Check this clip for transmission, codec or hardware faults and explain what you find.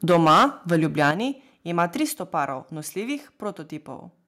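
Two recurring faults appear: microphone overload and stepwise reductions in microphone volume.

Microphone overload at 0.09–0.45 s, 0.71–1.11 s and 1.78–1.83 s puts a harsh, crackling edge on the loudest speech. It is likely caused by input gain driving peaks past the converter's limit, about 10, 6 and 2 dB over. Roughly a fifth of samples are flattened in the first stretch.

Microphone volume stepped down at 0.12 s, 1.11 s and 2.13 s: speech and background drop abruptly by about 2, 7 and 3 dB. Each drop follows distorted peaks.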